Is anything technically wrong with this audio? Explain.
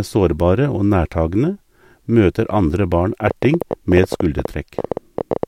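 Yes. From 3.28 s to 5.44 s, right after "møter andre barn", a train of clicks runs over the speech: sharp, similar-shaped ticks at about 12 per second, unevenly spaced, some thirty in all, peaking about 10 dB above the speech and audible in the gaps too. The likely cause is repeated pulses getting into the chain, such as electrical interference from nearby equipment or a faulty connection or power supply, each one adding a brief spike to the waveform.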